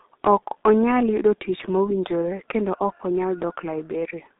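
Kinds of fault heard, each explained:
G.723.1 codec: an early internet-phone codec that chops speech into 30 ms frames and rebuilds it from a slowly updated voice model at a very low rate. Here the damage is heavy. Everything sits in a narrow 200 Hz to 3.7 kHz phone band with nothing above 3.8 kHz, so the speech comes out muffled and hoarse, consonants smear together, and this fits a bitrate of around 6 kbit/s.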